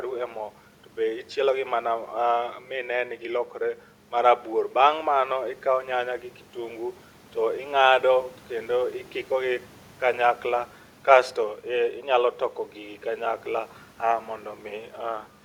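No technical faults can be heard in this recording.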